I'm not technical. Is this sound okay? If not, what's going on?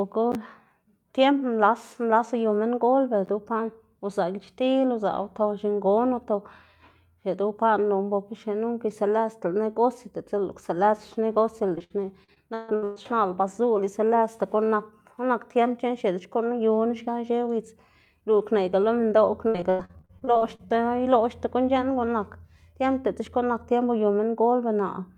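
No. Repeated packet loss makes the speech choppy and robotic from 11.75 to 12.98 s and 19.48 to 20.67 s, with missing pieces patched by stretched sound.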